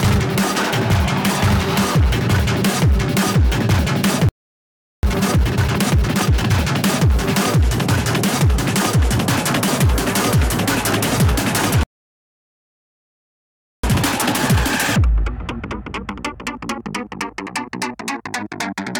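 At 4.29 s the sound cuts to silence for 0.74 s, a playback stall, likely from the player running short of data. From 5.03 to 6.51 s comes time-compressed catch-up. The audio runs 1.5 times fast at normal pitch, built from spliced, cross-faded pieces. At 11.83 s a second playback stall silences the sound for 2.0 s, likely a blocked player thread or empty buffer. Catch-up follows from 13.83 to 16.83 s, a gentler 1.15 times hurry.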